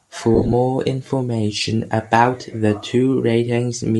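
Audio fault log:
Throughout: Bluetooth LC3 compression, plainly audible as a breathy, grainy edge on the speech, likely from a low-rate LC3 stream, which fits about 48 kbps in 10 ms frames. The encoder discards much of the upper spectrum and the decoder fills those bands with noise.
0.35–0.53 s: lost LE Audio frames, about 100 ms of dropouts scattered across 180 ms, the longest run lasting roughly 30 ms. The decoder repeats the last spectrum with randomised signs, so the speech smears into a brief noisy blur.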